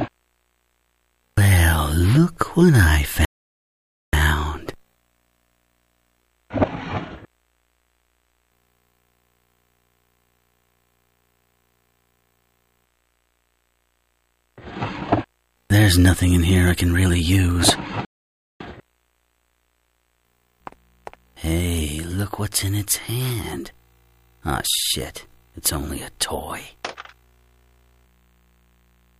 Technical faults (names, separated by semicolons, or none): playback stall